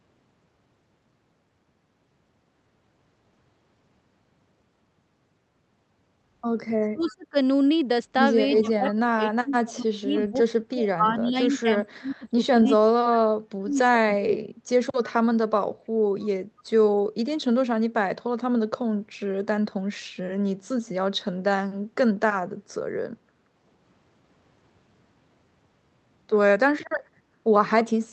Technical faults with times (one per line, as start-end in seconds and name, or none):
6.93-7.36 speech suppressed in double talk
8.50-14.42 speech suppressed in double talk
16.57-16.63 echo leak